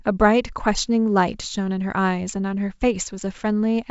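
No faults found: the speech runs through G.722 wideband telephone coding at 64 kbit/s, with nothing above about 7.7 kHz.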